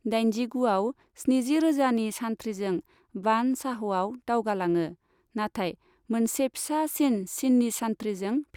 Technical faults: none

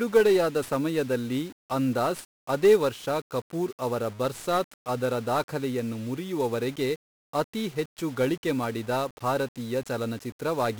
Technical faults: 1-bit DFPWM compression

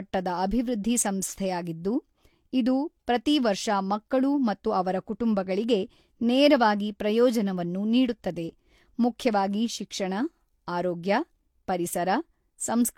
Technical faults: transcoding between lossy codecs

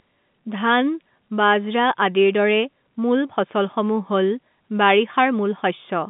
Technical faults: none

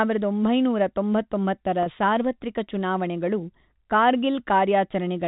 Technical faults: packet loss with pitch repetition

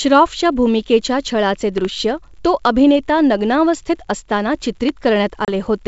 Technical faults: loud pop; packet loss on an ADPCM call

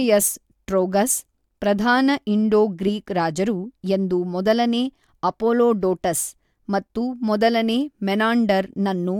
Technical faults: none

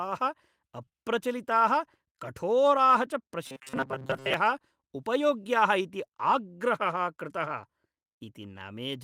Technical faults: lost packet rebuilt from error correction; short concealed packet loss; robotic sound from repeated short buffers

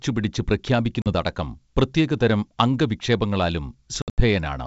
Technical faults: packet loss on an ADPCM call

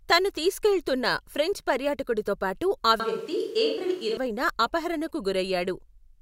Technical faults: switch to a distant microphone

